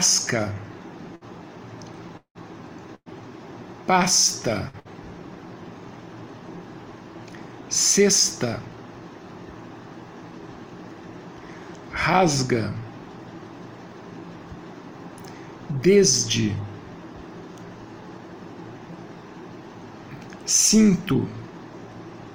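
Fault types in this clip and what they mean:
Burst of packet loss: Short holes where the last sound is stretched into a brief held buzz or hiss that fades, after which the audio picks up slightly further on with a slice skipped. They occur at 1.15, 2.95, 4.68 and 4.79 s, the last two almost back to back. Each covers about 60 ms, except the one at 2.95 s, which runs about 120 ms and thins to near-silence before returning. A few consecutive packets never arrived in time, and the receiver papered over the gap.
Long network dropout: From 2.17 to 2.38 s the sound freezes into a held buzz or hiss that decays for roughly the first part of the gap, then goes silent for around 90 ms before the audio resumes further along. About 180 ms of material is simply gone. This is likely an extended stall in the network stream, long enough that the receiver's concealment ran out and could only fall back to silence.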